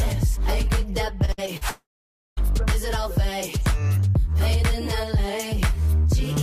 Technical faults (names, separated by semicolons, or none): repeated packet loss (robotic sound); long network dropout